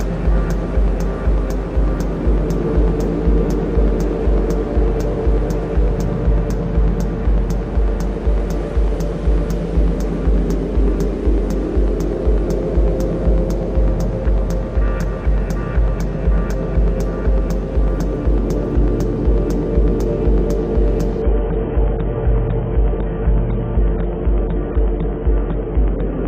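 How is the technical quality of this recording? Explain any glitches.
One real glitch: from 21.22 s to the end, it's an adaptive stream at a lower bitrate. The connection seems to have sagged, so the player jumped to a much leaner encode. Everything above 3.8 kHz vanishes abruptly, with no gap, leaving dull, smeary sound that fits a roughly 16 kbit/s AAC rendition.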